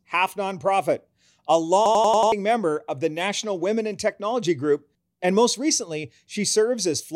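A system hang loop runs from 1.86 to 2.32 s: the driver stalled while the hardware kept replaying its ring buffer, so one 93 ms slice of speech repeats five times at 10.8 Hz, a machine-gun stutter that fits a 4096-sample buffer and swallows roughly half a second of audio.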